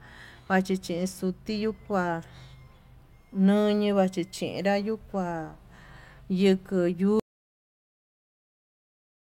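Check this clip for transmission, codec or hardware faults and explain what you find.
One fault is present: an audio dropout to silence from 7.20 s to the end of the speech clip. The input was likely lost, so the recorder kept writing silence. Unlike a noise gate or fade, the cut is abrupt and leaves no room tone.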